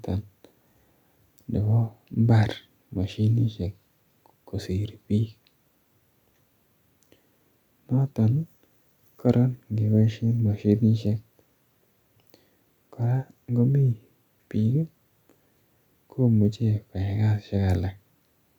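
No technical faults are audible anywhere in this speech recording.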